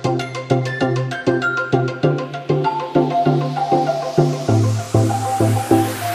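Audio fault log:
Nothing stood out on listening to the audio.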